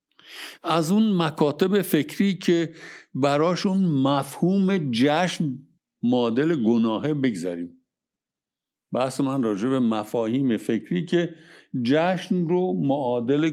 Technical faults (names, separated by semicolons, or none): none